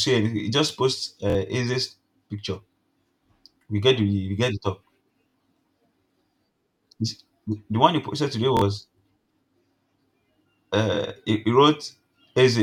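At 1.30 to 1.35 s, 5.29 to 5.34 s (after "we get the top") and 8.57 to 8.62 s (after "one he posted today"), a repeated buffer occurs: playback ran short of fresh audio, so a slice of about 23 ms, which fits a 1024-sample buffer, plays twice more with hard joins. It is heard as a quick stutter-buzz, and around 50 ms of speech goes missing. Unlike a dropout, there is no gap of silence, only identical repeats.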